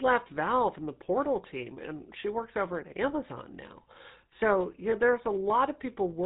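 Throughout, the speech has a buzzy, gravelly roughness and a muffled top, with nothing above 4 kHz. That is the GSM full-rate codec, plainly audible here. It rebuilds the voice from a vocal-tract model driven by sparse, regularly spaced pulses, which fits a 13 kbps stream.

From 4.90 to 4.94 s, the sound briefly hangs on a rough, metallic ring. These are lost GSM frames, and the gap fits a single 20 ms frame. The decoder filled it by repeating the last good frame's settings.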